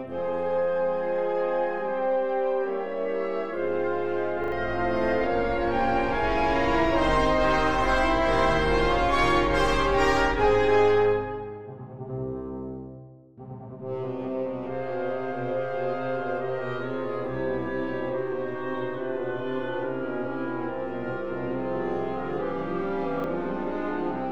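A short stutter breaks in at 4.44 s, where the same tiny slice of sound plays three times in a row with a hard join at each repeat, running to 4.52 s. A second, briefer stutter comes at 23.2 s, with one slice heard twice. Both are a repeated buffer: fresh audio did not reach the device in time, so it replayed the previous block, whose length fits a 40 ms buffer. Each hiccup skips real audio, a little under a tenth of a second at the first and about 40 ms at the second.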